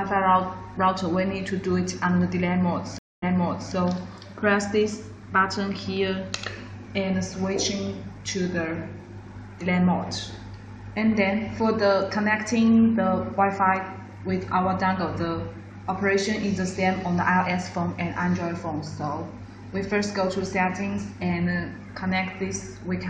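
At 2.98 s the audio cuts out for about 238 ms, and a stream reconnect follows, settling by 3.73 s. The player lost its connection, went silent, then rejoined and started a fresh decoder mid-stream. The server resent a burst, so playback resumes about 511 ms earlier and repeats a stretch already heard, softened at its start as the new decoder fades in. That repetition is what distinguishes it from a simple dropout, where the sound would resume without going back.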